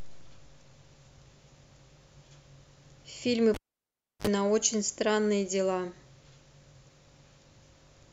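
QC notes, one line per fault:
3.54–4.27 s, cable pulled and plugged in: a live lead is yanked and reinserted, so a pop drops the speech into near silence for 680 ms, then 50 ms of 50 Hz mains buzz while only the plug tip connects, then a second pop.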